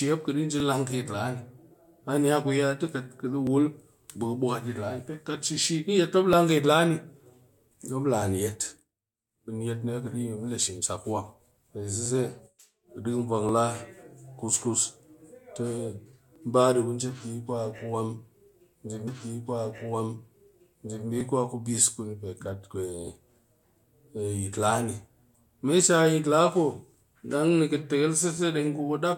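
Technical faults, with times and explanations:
0.60 to 28.37 s, clock drift buffer slips: a click every 1.43 s, about twenty in all, likely two clocks roughly 0.1 percent apart slipping a small block of samples.
19.07 to 21.06 s, stream segment repeated: about 2 s of speech plays a second time with a small blip at the jump back, because the same segment got queued twice.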